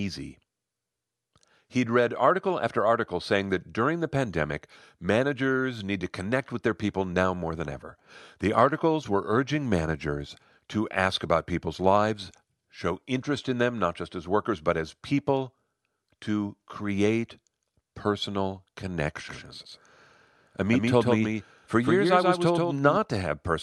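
Speech clip with a doubled audio track from 19.29 to 22.97 s: a second, abrupt full-band copy trails by about 150 ms at about 5 dB lower. It likely comes from a second capture path or misaligned edit, and shows as offset repeated waveform shapes and smeared spectrogram onsets.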